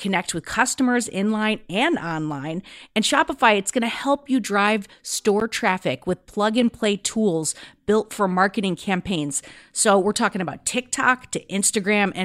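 At 5.40 s, between "to help you drive" and "traffic with plug and", a block of digital silence cuts out the speech for about 12 ms, which fits an unfilled 512-sample output buffer. Its short length makes it a tick or dip rather than an audible gap or a smoothed dropout.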